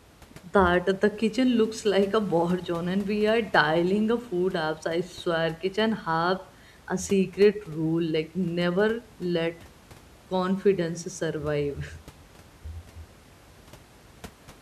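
No technical faults are audible.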